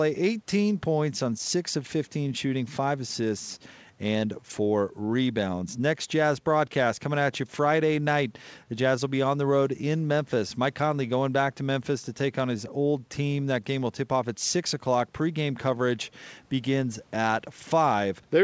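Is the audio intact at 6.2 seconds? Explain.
No. At 6.2 seconds the speech falls inside a stretch of repeated timing corrections running from about 0.22 to 18.31 s. Small hiccups and a slightly uneven tempo recur at irregular intervals, and the delivery runs at about 98% of its natural pace.

The cause is clock drift between sender and receiver. The sender's clock runs roughly 2 percent slow, so the jitter buffer keeps draining. To stay fed, the receiver repeatedly stretches or repeats short pieces, always in the same direction. Across the stretch these edits add roughly 0.4 s to the audio.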